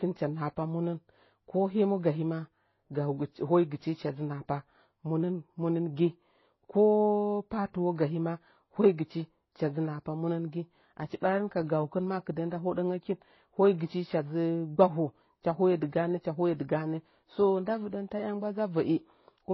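Speech clip with a dull, smeared top end and layered swirly artefacts running the whole way through, nothing above about 5.8 kHz. That sounds like transcoding between lossy codecs, likely a low-rate HE-AAC encode re-encoded to MP3 at a similarly starved bitrate, stacking both codecs' artefacts.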